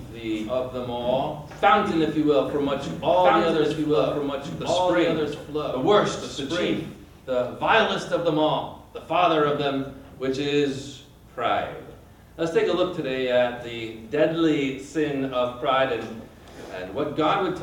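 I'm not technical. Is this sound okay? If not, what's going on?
No. From the very start until about 6.96 s there is a doubled audio track: everything you hear comes back a second time about one and a half seconds later, a little quieter. Unlike an echo from a room, the repeat doesn't fade or sound distant. It is a complete, clear copy, and at 6.96 s it stops abruptly. The likely cause is the same sound being recorded twice through a slower second route.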